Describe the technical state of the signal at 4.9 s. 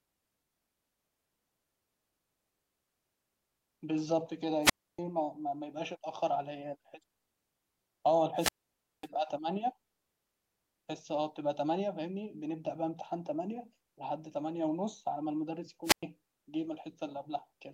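At 4.9 s the signal is inside a wireless microphone squelch dropout, which runs from 4.62 to 4.99 s. The radio link from an analogue FM microphone fades. The receiver's squelch then shuts the output off rather than pass raw static. A brief rise of hiss comes first. Then the speech drops into a hole of near silence lasting about 0.29 s. The speech returns just before 5.0 s.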